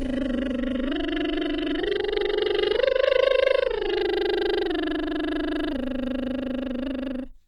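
For the first 4.0 s the music is dull and smeared, with nothing above 11.5 kHz, then brightens abruptly: an adaptive stream starting at a low bitrate.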